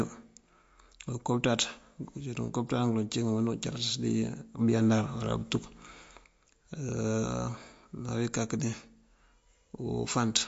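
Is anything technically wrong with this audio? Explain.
Yes, there are two faults in this speech clip.

MP3 compression runs throughout and is plainly audible. Nothing is present above 7.6 kHz, and weak frequency lines drop in and out between frames, giving a watery, swirly quality and smeared consonants. That likely comes from a low bitrate, around 48 kbps. A spectrogram shows a hard ceiling at 7.6 kHz with patchy, flickering upper bands.

A sudden gain jump lifts the level by about 6 dB from 4.59 s to 6.25 s. The voice and the background noise step up together and drop back at the end, likely from a gain setting applied without a ramp. The waveform shows abrupt vertical steps in the envelope at both edges.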